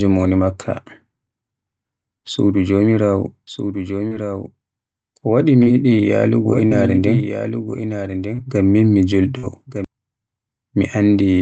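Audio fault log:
3.47 to 9.85 s, doubled audio track: just after "suudu jomiraawo", a second full-band copy of the speech enters about 10 dB down, trailing by roughly one second, with no decay or room colour, starting and stopping abruptly. The likely cause is a slower second capture path.
4.07, 5.63 and 8.35 s, short concealed packet loss: about 40 ms failed to arrive each time, and roughly 33 to 36 ms was filled by extending the preceding sound before blending back, heard as a brief smear or wobble where a short consonant can drop out.
6.66 and 9.38 s, burst of packet loss: about 40 ms went missing at each point, and the receiver held the last sound for roughly 45 ms while fading it, so a voiced sound turns into a short buzz or an unvoiced one into a hiss before the speech resumes further along. Both fall within the Opus call path's 8 kHz band at about 24 kbps.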